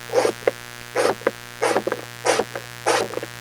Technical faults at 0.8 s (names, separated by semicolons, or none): mains buzz; skip ahead